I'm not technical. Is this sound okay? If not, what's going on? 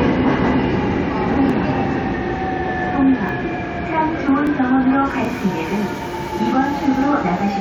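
No. Two kinds of small skips are audible.

Overlap between stream segments: tiny skips at 1.34, 3.29 to 3.31, 4.29 and 5.25 s, roughly once a second, where slightly overlapping pieces were trimmed.

Audio missing between chunks: at 1.50 and 4.47 s, about three seconds apart, a slightly longer jump drops a few hundredths of a second, likely lost while recording switched chunks.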